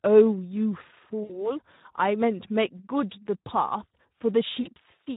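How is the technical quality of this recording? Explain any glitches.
The recording has clear technical problems: plainly audible codec coloration throughout and two short dropouts.

Speex codec, throughout: the speech sounds noisy, hoarse and grainy. Speex is a CELP codec that models speech with a filter and a coarse excitation signal. At this low setting, which fits about 11 kbps, too few bits reach the excitation to carry natural texture.

VoIP packet loss concealed by the speech codec, 1.23 to 1.53 s: the speech smears into a stretched, fading sound and stays weak and distorted afterward. About 60 ms of audio went missing, which fits three lost frames. The decoder repeated its last pitch and filter with falling gain, and recovery lagged.

The same fault recurs at 4.61 to 4.69 s, with a shorter smear. Roughly 40 ms was lost here, which points to two frames, and the sound was again extrapolated and faded.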